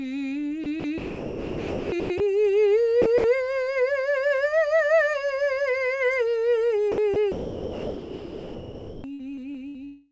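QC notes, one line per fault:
0.64–9.77 s, sound chopped by the voice detector: the music breaks up three times, at 0.64–2.20 s, 3.02–3.24 s and 6.92–9.77 s. Within these spans, about 1.1 s, 0.1 s and 1.9 s of audio are replaced by synthetic comfort noise, so phrases cut off abruptly. The likely cause is a sender-side voice detector treating quieter passages as silence and substituting comfort noise.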